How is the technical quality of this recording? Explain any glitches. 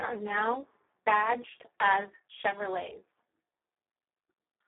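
Technical quality is poor throughout, with heavy codec damage from start to end. Speex codec: starved CELP coding, consistent with a bitrate around 4 kbps, leaves speech hoarse and noisy, confined to 300 Hz to 3.6 kHz, with nothing above 3.8 kHz.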